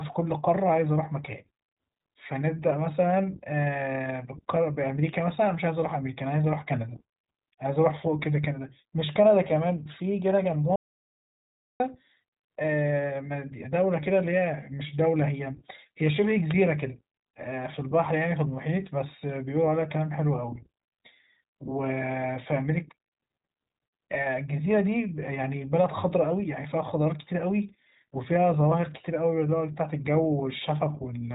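A speech recording carrying iLBC codec damage throughout. The band stops at about 3.8 kHz, and voiced sounds come out rough and slightly synthetic, the sound of a narrowband codec that codes each short frame's excitation on its own. The character fits iLBC's 20 ms, 15.2 kbps mode. From 10.76 to 11.80 s there is an audio dropout to silence: about 1.04 s of silence with no room tone, cutting in and out abruptly. The likely cause is a lost input or link while the recorder kept writing samples.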